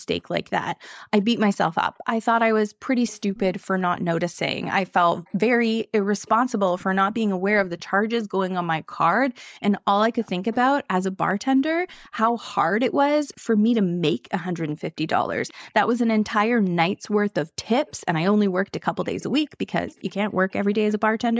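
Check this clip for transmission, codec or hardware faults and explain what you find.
Two faults run through this speech: a recurring echo leak and one brief dip in the background gated by the echo canceller.

Echo leak: a faint copy of the speech trails it by 410 ms, from 0.2 to 1.56 s, 3.07 to 3.4 s, 5.25 to 7.84 s and 9.78 to 20.93 s, at about 25 dB below the direct sound (about 30 dB in the third stretch). The likely cause is a far-end loudspeaker whose echo canceller let part of the returned signal through. Unlike room reverberation, it is one discrete late repeat rather than a smooth tail.

Background gated by the echo canceller: between 1.93 and 2.03 s the room sound sinks by up to about 10 dB for well under a tenth of a second, then recovers. The canceller clamped the microphone while the loudspeaker was active. The band stops at 8 kHz, as expected from call microphone processing.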